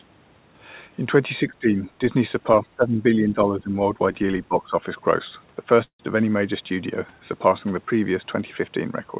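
Between 1.46 and 4.82 s the speech keeps ducking: at 1.46–1.82, 2.6–3.04, 3.2–3.75 and 4.48–4.82 s it drops by around 10 dB, and by about 20 dB in the 2.6 s stretch. That's speech suppressed in double talk, likely from an echo canceller mistaking the near talker for loudspeaker echo while both sides spoke.

At 5.84 s there's a call audio freeze lasting about 0.15 s. The stalled stream is padded with a fading tail that goes silent for roughly 90 ms, then picks up where it stopped. Nothing's lost, just a gap inserted, likely from late packets draining the jitter buffer. The band stops at 4 kHz, which fits a G.711 call path.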